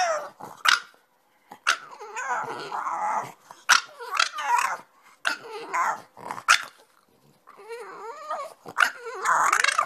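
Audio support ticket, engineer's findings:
No faults found on listen-through, nothing here that needs chasing.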